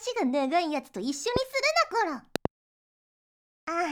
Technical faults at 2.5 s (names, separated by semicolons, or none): loud pop